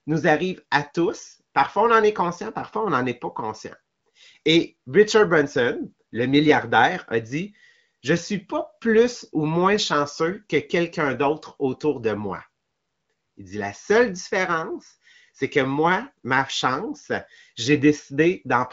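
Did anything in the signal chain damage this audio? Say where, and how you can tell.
No, nothing in the chain has damaged this speech. The audio stops at about 7.2 kHz with clear, unroughened speech, which fits an AMR wideband (HD Voice) codec running at a higher rate such as 18.25 kbit/s.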